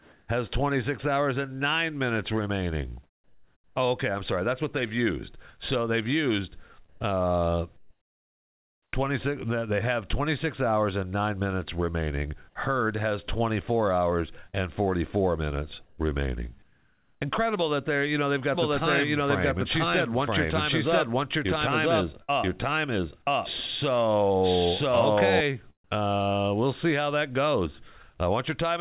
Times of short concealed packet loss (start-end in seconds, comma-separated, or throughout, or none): 14.50-14.55